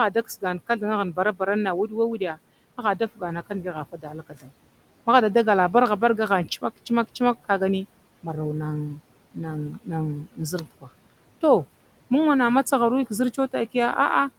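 At 0.11–0.82 s, 1.13–1.41 s, 1.88–2.38 s, 3.15–4.51 s, 9.72–9.88 s and 10.23–10.88 s, the noise suppressor mistakes parts of the speech for noise and cuts them by about 12 to 17 dB. Short stretches sound faint and swallowed, sinking toward the room noise.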